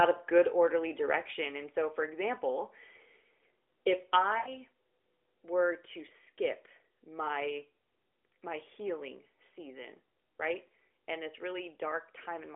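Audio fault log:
1.38 s and 6.27 s, microphone volume stepped down: the whole sound, background included, drops suddenly, by about 4 dB at 1.38 s and about 2 dB just after "were to" at 6.27 s. The likely cause is call software lowering the device's input gain in one step.
4.38–4.50 s, lost AMR speech frames: for about 120 ms the sound smears and fades instead of continuing. This fits a run of four lost 20 ms frames, with the narrowband AMR decoder repeating its last good settings at falling gain until real frames resume.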